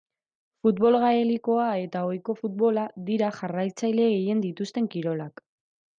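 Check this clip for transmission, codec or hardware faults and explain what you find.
Nothing stood out on listening to this speech recording.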